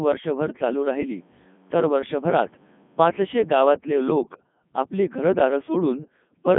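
From start to finish the speech has passed through the Codec 2 vocoder, heavily damaged and confined to roughly 150 Hz to 3.5 kHz, with nothing above 3.6 kHz. The decoder rebuilds the voice from sine waves driven by pitch, voicing and envelope, so it sounds robotic and buzzy, which fits the 3.2 kbit/s mode. Unlike a waveform codec's warbling or smearing, the original waveform is gone and the voice is resynthesised.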